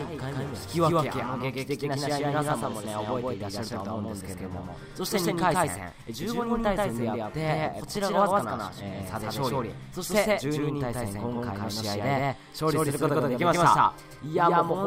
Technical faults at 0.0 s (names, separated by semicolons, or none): doubled audio track